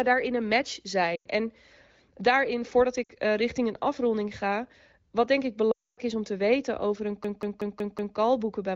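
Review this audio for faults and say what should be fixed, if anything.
Three times the speech briefly drops to near silence: at 1.15 to 1.27 s, at 3.04 to 3.12 s after "daarin voordat", and longest at 5.71 to 5.99 s after "ga wat denk ik", before "is om te weten". These are lost AMR speech frames. Radio errors corrupted the frames, so the decoder reused the last good pitch and vocal tract settings while lowering the gain. The gaps run about 100, 60 and 260 ms, which fits runs of roughly 5, 3 and 13 frames. Stronger channel coding or better radio coverage would prevent these losses.

From 7.25 to 8.17 s, just after "te weten over een", a short fragment repeats exactly as a rapid stutter at about 5.4 times a second, around five repeats in all. This is a system hang loop. The computer or audio driver stalled while the sound hardware kept replaying the same ring buffer. Each pass lasts about 0.19 s, which fits an 8192-sample buffer. 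Fixing the driver or system stall, or adding a watchdog that mutes the output when the buffer stops refreshing, would prevent it.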